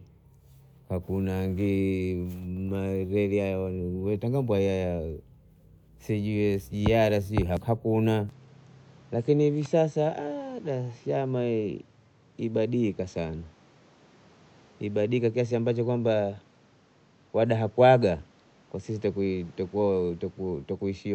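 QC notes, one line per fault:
8.29 s to end: input switched to a poorer device. The recording likely moved to a lower-grade input path, so nothing above 8.1 kHz survives and the speech turns duller, with new background noise roughly 35 dB below it. There is no gap at the switch and the level stays about the same.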